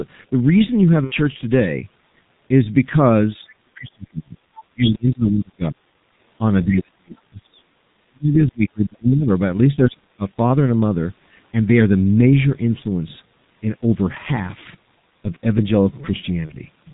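Heavy G.723.1 coding runs through the whole recording. It runs at a low bitrate of about 6.3 kbit/s, updates its voice model slowly and passes nothing above 4 kHz, so the speech is muffled and hoarse throughout, with smeared, indistinct consonants.

From 1.04 to 1.13 s, VoIP packet loss concealed by the speech codec causes a gap of about 60 ms, which fits two lost 30 ms frames. The decoder fills it by repeating its last pitch and filter at falling gain, producing a brief, fading smear. At 16.46 to 16.53 s the same happens again over about 30 ms, consistent with a single lost frame, leaving a shorter fading blur.

Between 8.24 and 8.37 s, a short scrap of a second voice sits well below the main speech. This is likely the other side's voice leaking through from a loudspeaker that the echo canceller did not fully remove.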